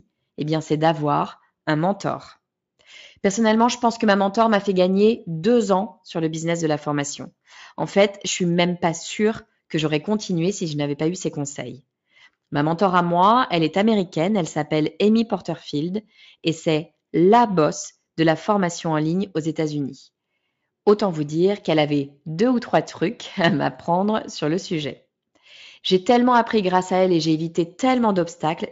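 No technical faults can be heard anywhere in this speech recording. It has passed through the Speex codec, and the sound fits a high-quality setting of around 34 kbps, with any coding damage faint at most.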